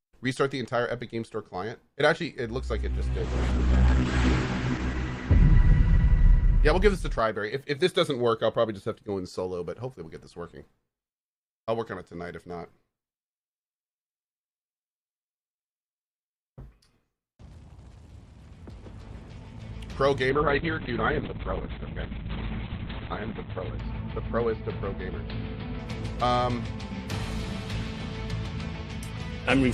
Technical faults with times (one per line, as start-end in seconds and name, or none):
3.19-9.09 call bitrate drop
20.30-26.35 call bitrate drop